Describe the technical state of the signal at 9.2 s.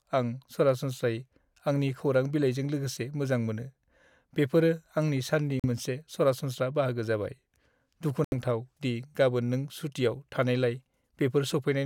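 At 9.2 s the speech signal is intact, with no fault to be heard at that moment.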